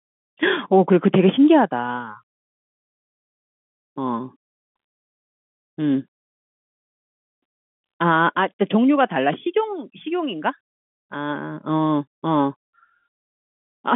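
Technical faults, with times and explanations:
No faults found; the speech sits in a telephone band of roughly 150 Hz to 3.5 kHz with nothing above 3.7 kHz, which fits ordinary G.711 mu-law telephone coding at 64 kbps.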